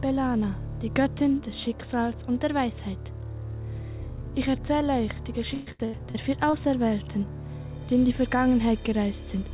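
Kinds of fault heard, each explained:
Repeated packet loss (robotic sound): Between 5.54 and 6.56 s the audio drops out five times in quick succession. Each hole is bridged by stretching the last received sound forward. About 330 ms is patched this way, roughly a third of that stretch. The longest gap is 119 ms. The result is a choppy stutter with pieces of the sound missing. It sits within a band that stops at 4 kHz, which fits a narrowband phone codec such as G.711.
Short concealed packet loss: From 7.04 to 7.10 s, about 30 ms of audio fails to arrive in time. The receiver fills the hole by carrying on the preceding sound, then blends back into the real signal. It is far shorter than the earlier run of gaps and stands alone. It is heard as a brief smear or wobble. Any very short sound falling in that window may simply vanish.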